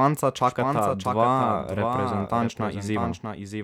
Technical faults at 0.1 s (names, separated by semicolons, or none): doubled audio track